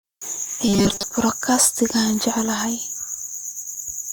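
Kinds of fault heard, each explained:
Robotic sound from repeated short buffers: from 0.68 to 1.03 s the speech turns into a rigid, metallic buzz at 200 Hz that still loosely follows the words. The likely cause is audio arriving too seldom, so playback loops the last fragment, which fits a 5 ms buffer, and most of the real signal in that stretch is skipped. A spectrogram shows flat, evenly spaced harmonics at multiples of 200 Hz, and the waveform shows one short shape copied over and over.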